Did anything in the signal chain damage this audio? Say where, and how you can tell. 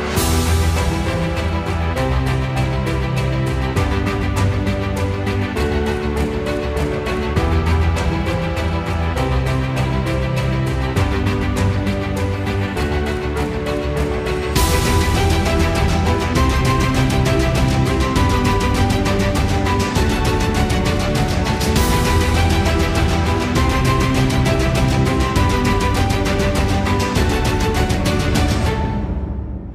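No, nothing along the chain seems to have hurt this one, and I can't hear any spot where something went wrong.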